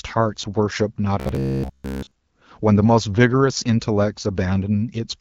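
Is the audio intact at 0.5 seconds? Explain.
Yes, the speech at 0.5 seconds is intact, with no fault at that moment.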